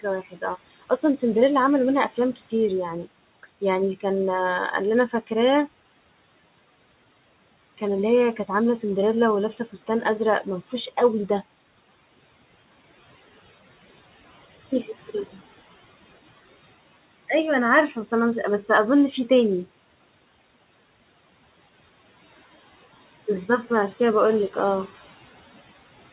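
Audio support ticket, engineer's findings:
Speech cut by the noise suppressor: suppressor misread low-level speech as noise and pulled its gain down with the background. At 0.25–0.43 s, 0.82–1.22 s and 17.9–18.12 s, dips of about 13, 15 and 7 dB, roughly a tenth to a sixth of a second each, leave soft onsets and word endings swallowed. Room noise sits about 20 dB below speech. G.711 call path band-limits at 4 kHz.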